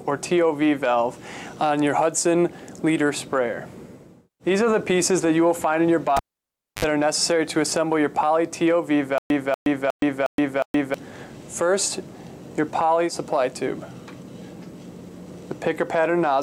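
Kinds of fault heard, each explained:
Cable pulled and plugged in: Between 6.17 and 6.85 s a live lead is pulled out and pushed back in. A sharp pop opens about 633 ms of near silence, then roughly 60 ms of 50 Hz mains buzz as only the tip makes contact, then a second pop as the sound returns. On a waveform there are two tall spikes around a flat stretch. A spectrogram shows vertical broadband lines with narrow 50 Hz harmonic bands just before the second.
Stutter with silent gaps: From 9.18 to 10.94 s the same 240 ms fragment plays five times, each followed by about 121 ms of digital silence, giving an even 360 ms cycle. This is likely a stalled player or stream that replays its last buffered piece on each retry and then runs dry, so the audio that should have filled that span is lost. A waveform shows identical blocks separated by dead-flat gaps. A spectrogram shows a repeating pattern cut by clean black columns.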